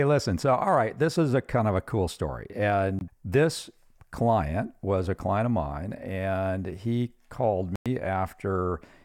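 At 2.99 to 3.01 s and again at 7.76 to 7.86 s, the speech cuts to brief silence. Each gap has abrupt edges or a fade of a few milliseconds. The sound then resumes as if it had played on. These are likely Bluetooth dropouts, where late packets were discarded. The gaps fit roughly one and five lost packets.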